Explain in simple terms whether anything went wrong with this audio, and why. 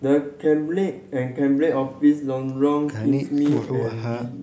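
Nothing went wrong that I could hear in this speech: the only thing noticeable is the usual call microphone processing, which trims away the very lowest bass and is normal rather than a fault.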